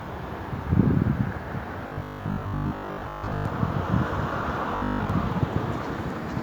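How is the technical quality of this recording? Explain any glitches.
Two stretches are degraded by robotic sound from repeated short buffers: 1.87 to 3.45 s and 4.76 to 5.10 s. In both, the audio takes on a rigid, metallic buzz at 50 Hz, and much of the original sound goes missing, though its rough outline remains. The likely cause is audio arriving too slowly, so playback loops the last 20 ms segment to fill the gaps. That fixed repeat rate imposes the steady 50 Hz tone.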